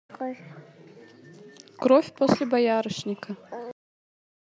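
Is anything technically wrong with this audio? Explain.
Yes. The speech has a cut-off end at 3.71 s: it stops mid-sound and drops straight to digital silence for the remaining 0.72 s. The final buffers were never written or played. A natural ending or fade-out would show decay, but here the sound halts abruptly.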